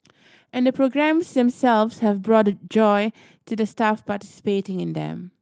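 At 1.19 to 1.21 s and 2.47 to 2.53 s, a lost packet rebuilt from error correction: the decoder played low-bitrate copies instead of leaving gaps, so those 20 ms and 40 ms stretches of speech sound briefly rougher and noisier.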